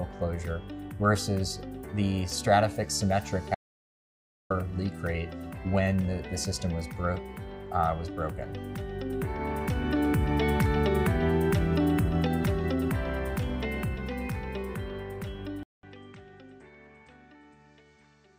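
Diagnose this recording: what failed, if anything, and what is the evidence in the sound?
The input link at the driver or device stage likely dropped, so from 3.55 to 4.50 s an audio dropout to silence cuts out 0.95 s, with no room tone.

At 15.63 s the input switched to a poorer device, likely at the driver level. After a 200 ms gap, the sound is duller with nothing above 8.5 kHz, about 10 dB quieter, with new noise about 45 dB down.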